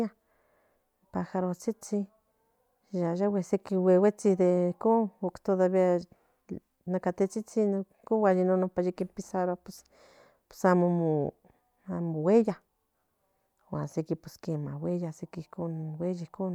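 No technical faults are audible anywhere in the speech recording.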